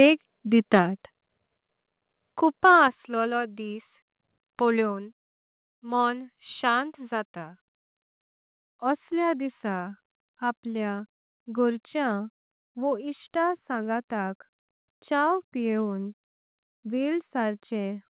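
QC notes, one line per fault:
0.01 to 0.04 s, microphone overload: the opening peaks square off at the converter's limit, about 1 dB over, likely from too much input volume, giving a brief crackle; flat-topped waveform.
1.02, 2.88 and 4.92 s, microphone volume stepped down: level drops abruptly by 3, 5 and 1 dB, the second just before "असलो दिस", likely the call software cutting input volume; visible waveform steps.
12.12 to 18.16 s, de-emphasis applied wrongly: an unneeded treble cut tilts the response smoothly downward, about 13 dB lower at 10 kHz than at 1 kHz, so sound turns dull and muffled; spectrogram upper bands fade.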